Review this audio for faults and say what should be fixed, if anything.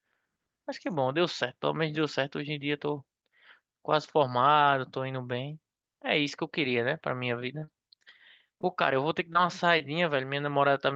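Short stall from a late packet at 7.59 to 7.64 s: the jitter buffer ran dry, so the receiver held the last sound for about 26 ms, then resumed without losing anything.

Short concealed packet loss at 7.64, 8.04, 8.61, 9.33 and 9.78 s: each drops about 20 ms, which the receiver bridges by extending prior sound, leaving a brief smear or wobble.

A slightly deeper jitter buffer and a more stable network path, with forward error correction enabled in the Opus call codec, would prevent both.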